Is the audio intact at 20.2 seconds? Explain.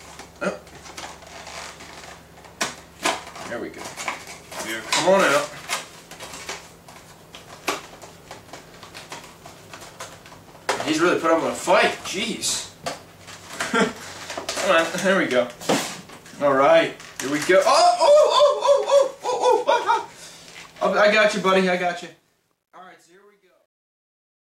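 Yes, the audio at 20.2 seconds is intact, with no fault at that moment.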